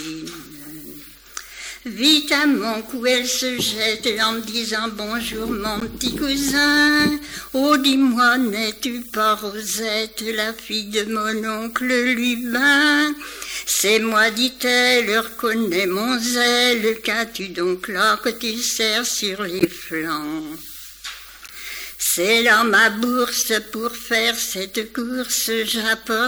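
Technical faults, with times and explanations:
5.80–5.83 s, 19.59–19.66 s and 21.47–21.50 s, corrupt frame decoded: damaged bits in compressed frames were decoded as if valid, so misread gains and codes put energy at the wrong frequencies. Each event is a short alien burst lasting about as long as the damaged frames. The lengths fit roughly two, three and one frame. The 19.59 s event is the loudest (about -5 dBFS), and the 21.47 s one the weakest (about -20 dBFS).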